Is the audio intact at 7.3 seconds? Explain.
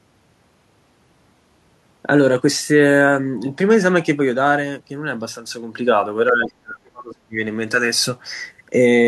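No. At 7.3 seconds the speech is still inside a stretch of suppression running from 6.32 to 7.36 s, where the level sinks sharply, at its deepest by about 30 dB, so the talker no longer sounds whole. This is speech suppressed in double talk, likely caused by both sides talking at once: the echo canceller mistook the near talker for loudspeaker echo and turned both down together.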